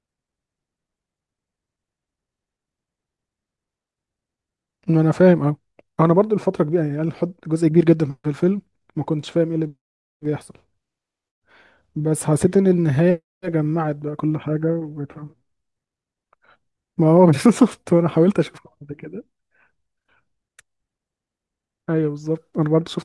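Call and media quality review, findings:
No faults found on listening; speech path shows no audible dropouts, distortion, level or timing problems.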